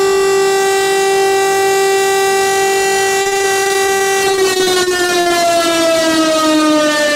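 Repeated packet loss (robotic sound) runs from 3.21 to 5.32 s. Over this stretch, packets kept arriving late or not at all, leaving more than twenty short holes, the longest 52 ms. Each hole was patched by stretching the last bit of sound forward, for about 506 ms of filler in total, while about 420 ms was simply missing. With roughly a quarter of the span concealed, the sound turns choppy, with pieces audibly dropped.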